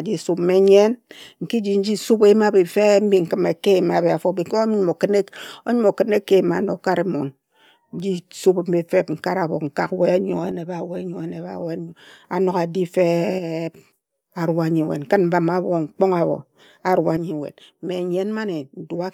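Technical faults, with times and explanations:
10.51–12.24 s, 13.39–13.93 s and 17.17 s to the end, one channel drops out: the speech level falls abruptly by about 6 dB and recovers just before "a nog" and "arua nyi". The likely cause is one stereo channel going silent, halving what remains in the mono sum.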